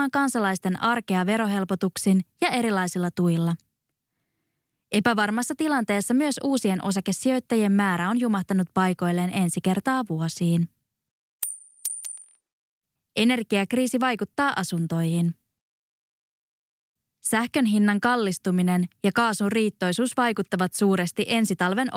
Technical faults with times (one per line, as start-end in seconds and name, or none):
none